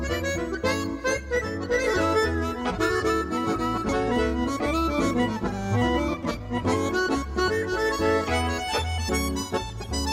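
At 3.89 s the decoder fails to play a run of compressed frames, either because they are missing from the stream or because they were rejected as corrupt. This is compressed frames skipped: playback jumps forward by about half a second, a whole multiple of what sounds like a 32 ms frame. The material in between is simply gone.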